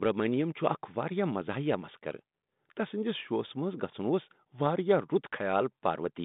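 No technical faults can be heard in the speech: it sits within a telephone band of roughly 150 Hz to 3.7 kHz with only the light coding texture expected of a G.726 ADPCM link at 32 kbit/s, such as a DECT cordless phone would carry.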